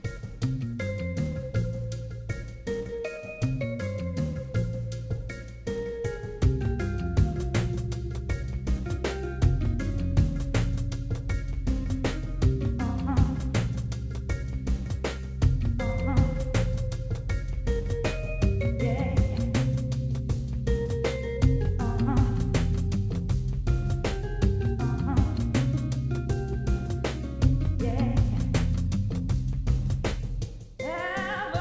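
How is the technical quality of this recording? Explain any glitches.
No glitches; no faults heard.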